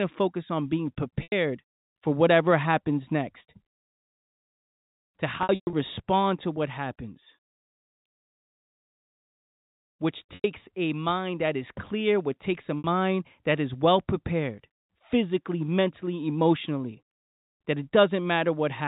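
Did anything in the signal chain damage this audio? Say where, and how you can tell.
Yes, at the network stage: packet loss with pitch repetition, bridged by concealment over the telephone G.711 path. Gaps fall at 1.23 s after "to focus on being" (90 ms), 5.43 to 5.73 s (210 ms scattered, longest run 120 ms), 10.35 s before "a mind that is" (90 ms), and 12.79 s after "clear which takes a" (60 ms), which fits 30 ms packets. The receiver loops the last pitch cycle, so the audio sounds briefly held and buzzy. On a waveform that looks like identical decaying cycles, and a spectrogram shows frozen flat harmonics. The 120 ms run fades to silence.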